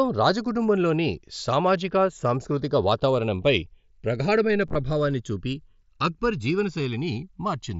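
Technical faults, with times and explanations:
Throughout, channels drifting apart. Separate clocks about 150 ppm apart slide the delay to about a millisecond. Summed to mono, sweeping comb notches give slow flanging.
4.68 to 4.75 s, concealed Bluetooth headset packet loss, between "సామాజిక సాంస్కృతిక వాతావరణంపై ప్రగాఢమైన" and "చూపి అక్బర్". About 45 ms is missing, scattered over 75 ms. The gaps are filled with repeated recent waveform, and the longest run of loss is only about 15 ms.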